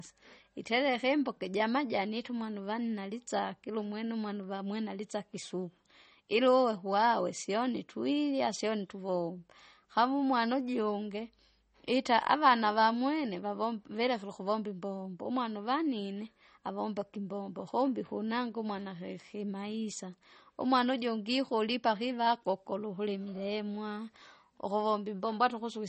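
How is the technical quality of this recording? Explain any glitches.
The recording has clearly audible coding damage throughout and one brief click.

MP3 compression runs throughout. The speech is watery and swirly, with metallic chirps on s sounds and smeared attacks. This is likely a low-bitrate MP3 encode, which fits roughly 32 kbps, where the encoder cuts the treble and zeroes weak frequency lines that flicker from frame to frame.

Dropped samples occur at 10.61 s, right after "sione tuvomba kamu umwana". Only a handful of samples, around a tenth of a millisecond, are missing, likely from a stream interruption. The waveform jumps abruptly and produces a single sharp click, seen as a thin vertical line.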